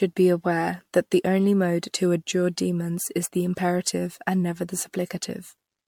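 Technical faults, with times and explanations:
Throughout: generation loss. The speech sounds swirly, hollow and smeared, with blurred attacks and nothing above 19.8 kHz, likely from about seven successive MP3 encodes at what fits 96 kbit/s; each pass requantises on a shifted frame grid, so noise and spectral gaps pile up.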